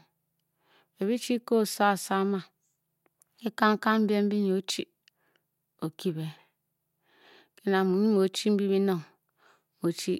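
The speech recording shows no technical faults at any point, with its signal path intact and free of any audible defect.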